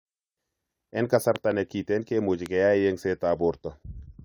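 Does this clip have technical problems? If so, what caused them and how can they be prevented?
Yes. A loud pop occurs twice in this speech. Between 1.36 and 1.53 s, just before "ne kiten kimuche", there are two sharp pops in quick succession, and a single pop follows at 2.46–2.48 s, right after "ne kiten kimuche". Each peaks roughly 10 dB above the speech, which continues underneath. The likely cause is a sudden voltage pulse from a switch, a loose plug, static discharge or a driver glitch entering the signal chain. Securing connections, muting before switching, and grounding equipment against static would prevent it.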